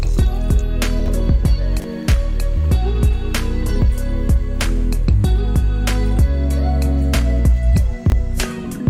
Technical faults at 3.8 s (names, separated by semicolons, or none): none